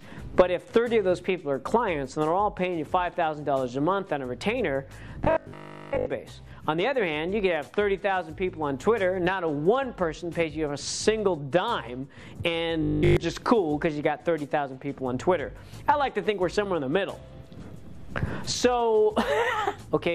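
From 5.25 to 6.07 s and 12.83 to 13.17 s, robotic sound from repeated short buffers. A rigid 50 Hz buzz replaces about 70% of the audio in the first and all of it in the second, likely from 20 ms fragments looping.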